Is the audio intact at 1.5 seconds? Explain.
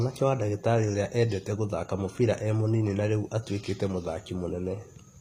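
No. At 1.5 seconds the speech carries HE-AAC compression damage, and it runs through the whole clip. The codec likely codes only the lower spectrum and rebuilds the treble by copying lower bands upward under a coarse envelope. The harmonics above that crossover do not line up with those below, so s sounds come out gritty and lispy. Nothing is present above 15.5 kHz. The damage is plainly audible and fits a low bitrate near 24 kbps.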